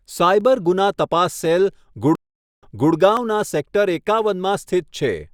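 Dropped samples at 0.41 s and 3.17 s in this speech give two sharp, isolated clicks, likely from a fraction of a millisecond of missing audio making the waveform jump. A stream reconnect from 2.15 s to 2.93 s cuts the sound for about 0.47 s. A fresh decoder then restarts playback 300 ms earlier, so a short stretch repeats as it fades back in.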